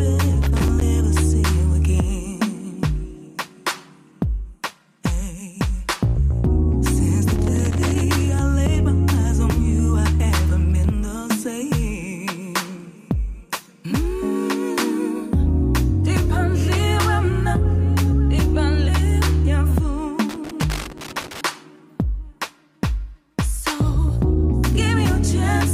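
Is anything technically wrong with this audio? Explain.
Yes. Loose connector crackle occurs three times, at 0.42 to 0.81 s, 7.31 to 8.01 s and 20.29 to 21.41 s. A worn or dirty contact in the signal path intermittently makes and breaks, chopping the audio, heard as irregular bursts of scratchy crackle lasting about 0.4 to 1.1 s each.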